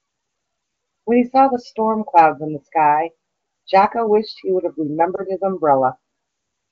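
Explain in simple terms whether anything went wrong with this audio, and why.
A lost AMR speech frame causes a brief dip or warble at about 5.15 to 5.24 s, which fits a single missing 20 ms frame. A radio error corrupted that chunk, so the HD Voice decoder filled the gap by repeating the previous sound at lower volume.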